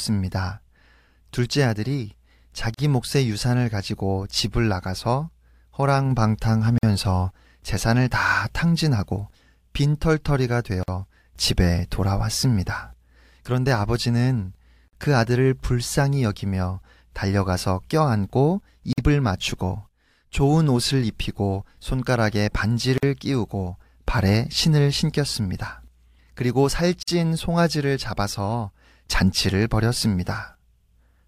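Speech with a gap at a join of encoded pieces every 4 s: silences of 39 ms at 2.74 s, then 49 ms at 6.78, 10.83, 14.88, 18.93, 22.98 and 27.03 s. Separately encoded segments were joined untrimmed, keeping encoder delay and last-frame padding.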